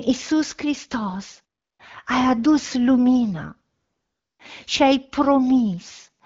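AMR comfort noise appears from 1.61 to 1.79 s and again from 3.77 to 4.39 s, just before "și ai": the phone judged these pauses silent and stopped sending speech frames, so the receiver substitutes smooth synthetic noise for the real background, audibly switching in and out.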